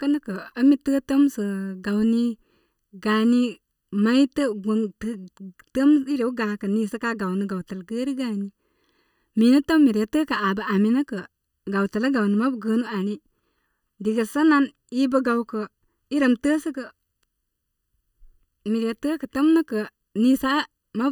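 Speech runs hollow and phasey for the whole clip, the signature of channel delay (comb filtering). One channel arrives just under a millisecond late, and when both are folded to mono the shared content cancels at evenly spaced frequencies. The first notch sits around 700 Hz, with further notches repeating roughly every 1.4 kHz above it. Because the offset never changes, the notches stay fixed, giving a steady hollow, tubby coloration rather than a sweeping one.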